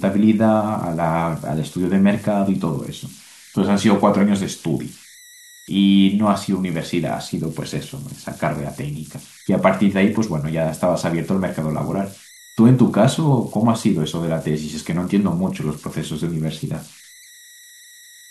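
Throughout the speech, converter idle tones sit under the signal: a delta-sigma converter running without dither settles into repeating bit patterns on low-level input, and those cycles emerge as a whistle somewhere around 2 kHz, at about -25 dB relative to the signal. It is clearest in pauses and lends quiet passages a grainy edge. A spectrogram would show a thin horizontal line near 2 kHz persisting between utterances.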